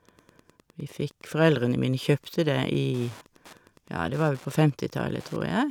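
Wi-Fi interference runs throughout: the audio circuit rectifies a nearby radio's 102.4 ms beacon, producing steady ticking about ten times a second, well below the speech.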